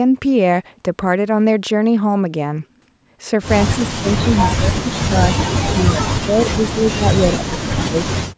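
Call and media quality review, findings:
Speech suppressed in double talk, 3.76–5.28 s and 5.6–8.37 s: level dips in pieces, deepest around 30 dB, about 1 s and 2 s affected. Likely echo-canceller suppression during overlapping talk; choppy gain ducking tracks the far end, unlike packet-loss gaps or robotic concealment.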